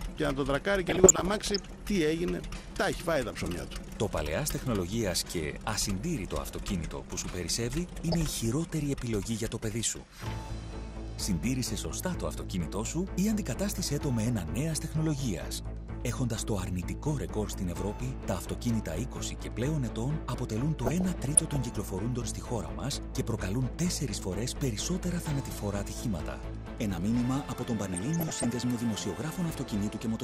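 Right from the start the whole thing sounds dull, with a gurgly, granular edge and the top end flickering out. That's likely MP2 compression at a low rate, something like 80 kbps. On top of that there's DAB burbling at 0.87 to 1.78 s, 7.89 to 8.33 s, 20.86 to 21.56 s and 27.94 to 28.47 s: short blips of noise in single sub-bands where bit errors slipped into the audio data.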